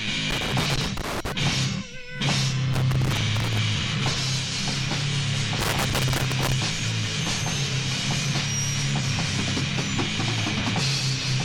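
Loose connector crackle appears three times: from 0.30 to 1.32 s, from 2.73 to 3.58 s, and from 5.59 to 6.52 s. In each stretch a worn or dirty contact keeps making and breaking, so the signal is chopped into an irregular burst of scratchy crackle lasting close to a second. The irregularity sets it apart from the evenly spaced ticks of a buffer or clocking fault, and the bursts start and stop abruptly, unlike steady hiss.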